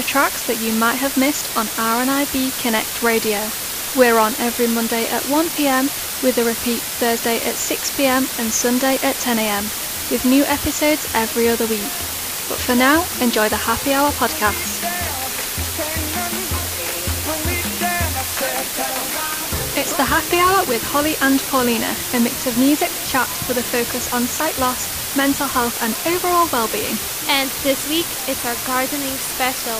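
Low bit depth with dither runs throughout. The audio uses just 4 bits, dithered before rounding, leaving a steady, even hiss nearly as loud as the sound, without distortion.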